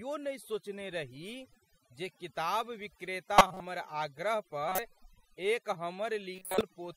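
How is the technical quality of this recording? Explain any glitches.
The technical quality is poor: the speech has been over-processed throughout, and three short bursts of corrupted audio break through.

Overdone noise removal runs the whole length. The noise reducer was set so aggressively that bands near its noise estimate are pulled down or cut entirely, taking quiet parts of the speech with them. The background drops to near silence with twinkling specks.

Corrupt frame decoded occurs at 3.38–3.60 s, 4.69–4.79 s and 6.36–6.61 s. Damaged compressed frames were played anyway, so misread data put energy at wrong frequencies. Each event spans a handful of frames and is heard as a brief burst of wrong-frequency sound, the first loudest, peaking around −10 dBFS.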